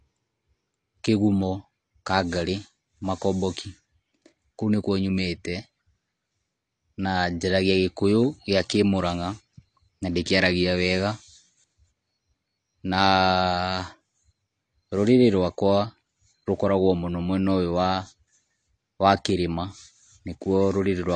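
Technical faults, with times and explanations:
Throughout, AAC compression: the speech sounds dull and smeared, with a warbling, fizzy texture on sustained vowels and sibilants, and nothing reaches above 9.4 kHz. On a spectrogram the energy stops at a flat, hard ceiling at 9.4 kHz. This is likely AAC-LC coding at a low bitrate, around 32 kbps, where the encoder drops the top band and quantises the rest coarsely against a hearing model.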